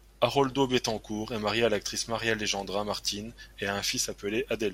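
A short speech recording, with nothing technically wrong with it.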